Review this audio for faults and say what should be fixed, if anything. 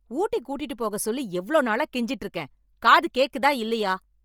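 Bluetooth LC3 compression affects the whole speech clip. Upper frequencies sound grainy and breathy, likely from heavy low-bitrate coding, consistent with about 32 kbps in 10 ms frames. Route audio over a wired link or a higher-bitrate Bluetooth setting.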